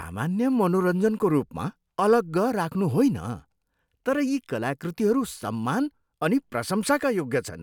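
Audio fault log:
No fault was found in this speech audio.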